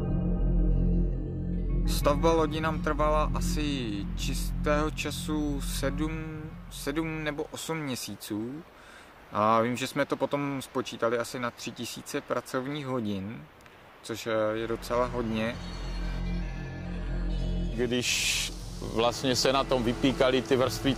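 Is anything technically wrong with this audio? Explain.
No, nothing technically wrong can be heard here.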